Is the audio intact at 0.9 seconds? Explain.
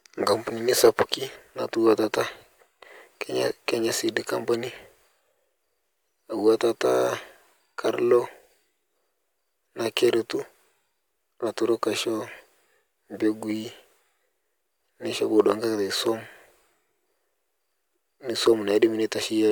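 No. From 0.84 to 1.14 s the speech drives a stage in the signal chain past its limit, by about 5 dB, so hard clipping occurs. Whatever exceeds the ceiling is simply cut off, leaving flat-topped peaks instead of rounded waveform crests. Those squared edges add harmonics high in the spectrum that the speech itself never contained, so around 0.9 s the loudest moments carry a harsh, gritty crackle laid over the sound.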